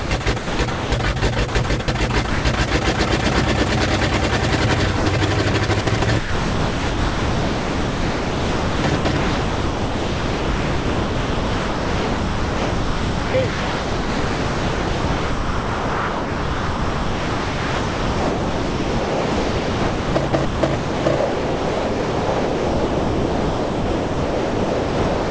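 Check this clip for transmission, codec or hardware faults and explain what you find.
Yes, there are faults: voice-detector gating intermittently replaces the sound with synthetic background, while the G.722 call path at 64 kbps, with nothing above 8 kHz, accounts for the band-limited tone.

Sound chopped by the voice detector occurs at 0.00–0.92 s, 1.49–1.88 s and from 5.51 s to the end at 25.3 s. The likely cause is the sender's detector toggling transmission repeatedly, so the receiver substituted comfort noise. About 0.56 s of the first stretch, 0.15 s of the second, and roughly 18.4 s of the last are synthetic. The result is choppy, with holes where the sound is replaced.

Sound dropped by the voice detector occurs at 1.19–1.22 s, 2.30–2.45 s and 4.97–5.06 s, with lengths of 30, 150 and 90 ms. The likely cause is that the detector classified low-level sound as background and stopped sending, so comfort noise filled the gap until transmission resumed. 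Each event is heard as the sound briefly giving way to steady noise or near silence, then returning.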